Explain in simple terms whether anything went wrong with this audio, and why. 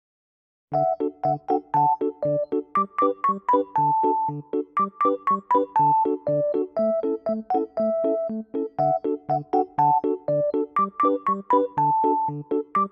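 Nothing went wrong here; no dropouts, glitches, or other technical faults are audible anywhere in the recording.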